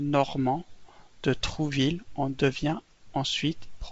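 No technical faults are audible in this speech recording.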